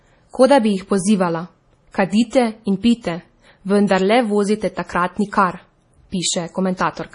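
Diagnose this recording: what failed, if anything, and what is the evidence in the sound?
The fault sits at the codec stage, likely MP3 compression, and runs through the whole speech clip. Nothing survives above 10.6 kHz. On a spectrogram that shows as a hard, flat ceiling, with weak high-frequency detail below it breaking into isolated patches that appear and vanish frame to frame. The damage is heavy, which points to a very low bitrate of around 32 kbps. Starved of bits, the encoder discarded the treble and dropped quiet spectral lines, giving a watery, swirling texture.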